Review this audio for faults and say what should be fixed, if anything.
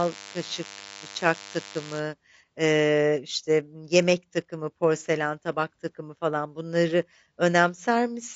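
Throughout the speech the sound is rough and grainy, with noise filling the gaps between harmonics; this is likely low-delay AAC compression (AAC-ELD), whose short frames smear pitch detail at a rate around 32 kbps.

From 0.0 to 2.0 s, ending just before "eee işte", a thin, steady DECT cordless phone buzz sits roughly 20 dB under the speech: a nearby handset's 100 Hz radio bursts rectified into the audio circuit.

To prevent both, raise the codec bitrate well above 32 kbps and keep DECT phones and base stations away from the microphone and its cabling.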